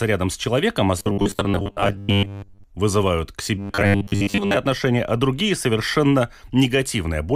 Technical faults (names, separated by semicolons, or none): robotic sound from repeated short buffers